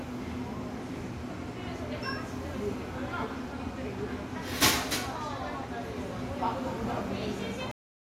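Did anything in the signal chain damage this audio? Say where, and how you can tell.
Yes, the recording has a cut-off end, most likely from the storage or buffer stage, where the final blocks of audio were never written. At 7.71 s the sound stops abruptly while still in progress and falls straight to digital silence for the last 0.3 s, with no decay or room tail. On the waveform the trace drops from full activity to a flat line in one step; on the spectrogram every frequency band ends at the same vertical edge, followed by blank space.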